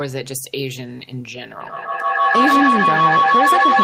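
From 1.6 s to the end of the clip, a feedback howl takes over the speech. Two devices on the same call in one room form a loop, microphone to loudspeaker and back, that adds level on each pass. Unlike an echo, whose repeats fade, these swell and narrow to a ringing tone around 1 kHz, pulsing roughly every 150 ms and peaking about 6 dB above the speech.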